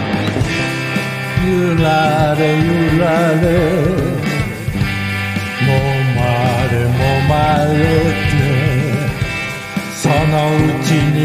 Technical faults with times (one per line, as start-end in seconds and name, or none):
none